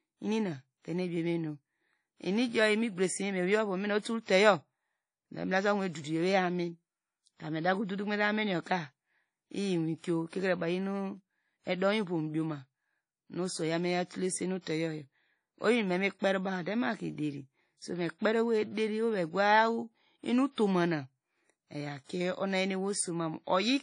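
WMA compression runs through the whole speech clip: nothing sounds above about 10.1 kHz, with a washy, ringing smear and hiss that swells and fades with the signal, likely from a transform codec at a low bitrate, consistent with 32 kbps, spreading quantisation noise across long blocks.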